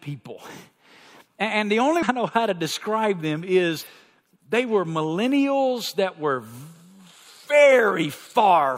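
At 1.98 s, just before "know how to describe", and at 3.78 s, after "how to describe them", damaged data in a compressed stream makes the decoder lose sync briefly.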